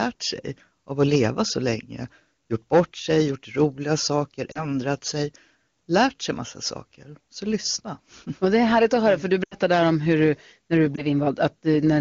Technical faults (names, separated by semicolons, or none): lost AMR speech frames